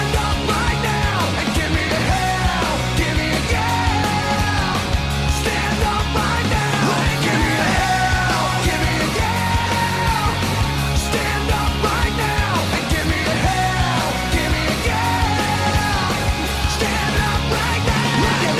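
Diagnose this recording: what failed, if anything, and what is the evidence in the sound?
Nothing in this recording points to a failure at any stage; the sound carries on steadily with no breaks, glitches or damage to track down.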